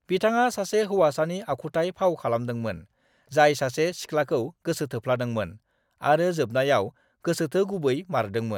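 There are no technical faults to describe in this speech recording.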